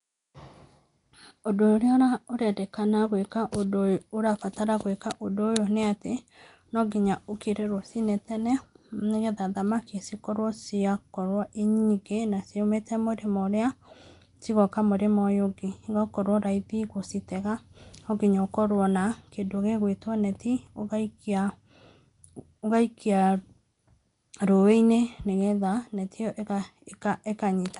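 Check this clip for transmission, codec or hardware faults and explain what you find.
One codec fault runs through the whole clip. Nellymoser compression, throughout: the speech has a rough, hissy halo, a smeared, underwater quality and nothing above 10.6 kHz. The likely cause is Nellymoser Asao coding, which at two bits per sample starves weak bands and fills them with noise. The plainly audible damage fits a rate near 44 kbps.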